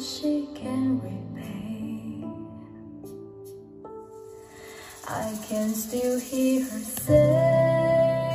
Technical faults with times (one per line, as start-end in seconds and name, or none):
none